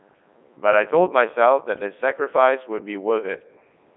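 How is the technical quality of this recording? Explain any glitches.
Poor: the speech has passed through a Codec 2 vocoder for its whole length, band-limited to about 200 Hz to 3.7 kHz with nothing above 3.9 kHz. Only pitch, voicing, energy and spectral envelope survive, so resynthesis from sine waves sounds robotic and buzzy, and the damage is heavy even in the 3.2 kbit/s mode.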